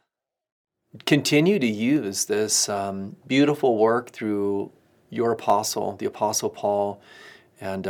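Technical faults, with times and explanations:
1.96 s and 5.50 s, dropped samples: each time a single sharp click cuts through the speech, showing as a thin vertical line across the whole spectrum. The likely cause is a handful of samples missing from the stream, well under a millisecond's worth, so the waveform steps abruptly from one value to a later one. That discontinuity carries broadband energy and is heard as a click, while the gap is far too short to remove any audible sound.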